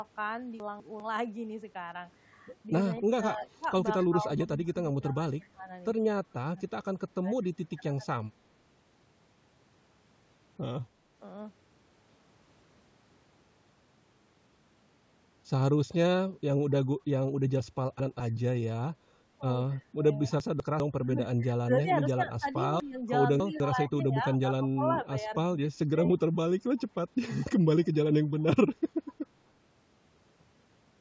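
Speech clip with three kinds of fault. Chunks out of order occur at 0.6–1.0 s, 17.6–18.2 s, 20.4–20.8 s and 22.8–23.6 s. In each, a 200 ms block plays one, two or three blocks late, giving a jumbled moment with hard joins. Speech suppressed in double talk appears as dips and broken-up stretches at 3.01–8.51 s (about 1.5 s affected, dropping by as much as about 20 dB), 19.87–19.96 s, 21.0–25.99 s (about 2 s affected, up to about 15 dB down) and 29.13–29.19 s (about 10 dB down), likely from an echo canceller ducking this talker while loudspeaker audio played. An echo leak returns a copy of the speech 247 ms late at 7.42–7.75 s, about 40 dB below the speech, and again at 26.78–29.12 s, about 30 dB below. This is likely residual loudspeaker pickup the canceller did not remove. The call microphone processing passes nothing above 8 kHz.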